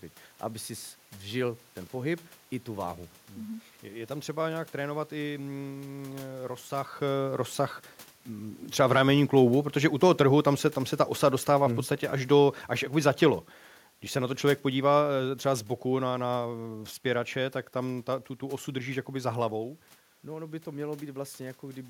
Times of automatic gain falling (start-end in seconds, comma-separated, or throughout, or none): 9.73-17.34